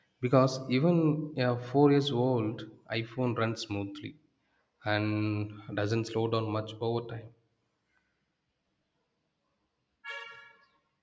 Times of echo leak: none

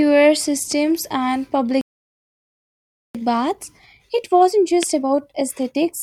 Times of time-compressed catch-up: 3.15-6.02

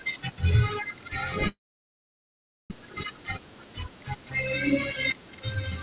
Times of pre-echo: none

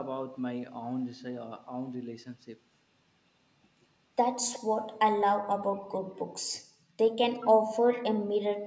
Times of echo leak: 4.53-4.59, 7.34-7.46, 7.91-8.04

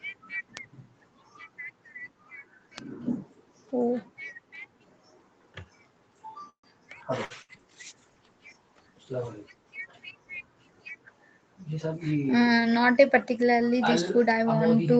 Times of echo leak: 13.66-13.79

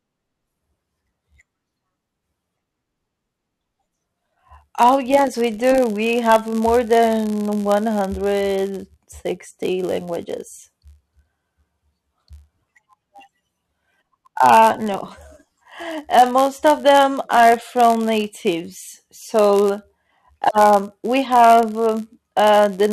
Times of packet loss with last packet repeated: none

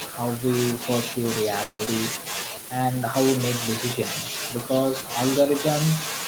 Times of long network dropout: 1.63-1.90

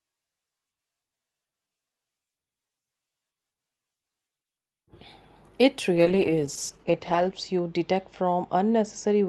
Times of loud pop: none

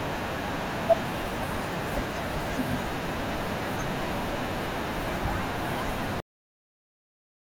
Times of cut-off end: 6.20-7.49

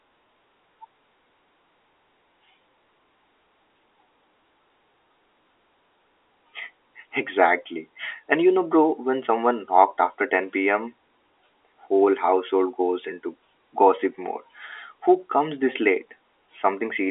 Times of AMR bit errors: none

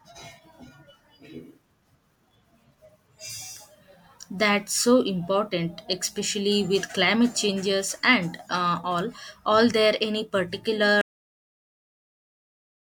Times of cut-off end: 11.01-12.93

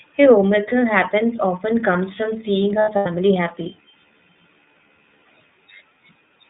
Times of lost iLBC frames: 2.82-3.07

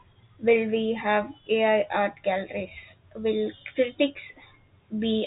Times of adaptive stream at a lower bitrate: none

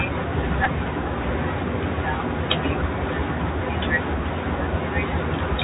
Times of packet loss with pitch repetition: none

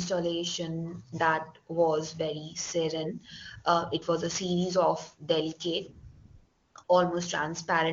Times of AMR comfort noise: 6.11-6.87

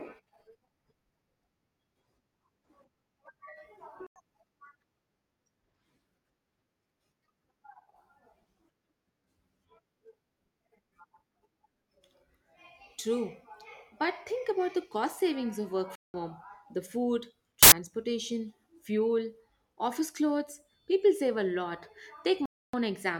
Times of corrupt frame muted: 3.97-4.16, 15.95-16.23, 22.36-22.74

